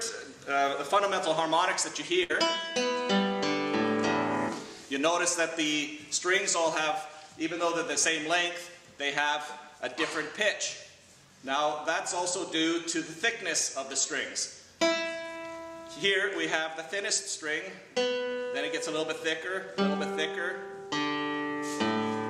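At 2.23 to 2.31 s there is a burst of packet loss. The receiver stretched the last sound for about 60 ms, fading it, then skipped ahead past 60 ms of missing audio. Unlike a plain dropout, the gap is filled, not silent.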